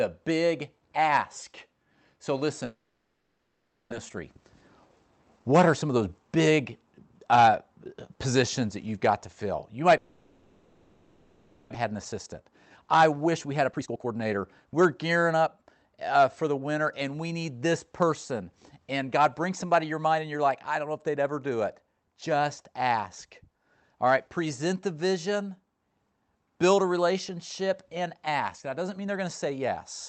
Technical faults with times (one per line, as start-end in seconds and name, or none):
2.65-3.94 long network dropout
4.02-5.97 jitter buffer speed-up
9.97-11.76 long network dropout
11.84-15.70 jitter buffer speed-up